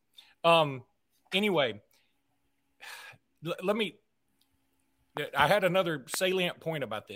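At 5.17 to 5.19 s, just before "I had another", and again at 6.14 to 6.16 s, just after it, a loud pop stands roughly 10 dB and then 15 dB above the speech, likely a voltage spike from a switch or static. Unlike a dropout, the speech carries on beneath each thump.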